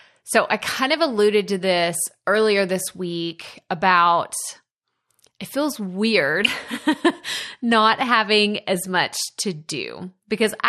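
Throughout, the speech sounds dull and granular, with a gurgling edge. This is likely MP2 compression, with starved upper sub-bands pointing to a low rate near 80 kbps.

From 6.43 to 6.48 s, just after "it feels weird", DAB burbling gives a brief burst of noise blips. Bit errors have corrupted the audio data across what fits about three audio frames.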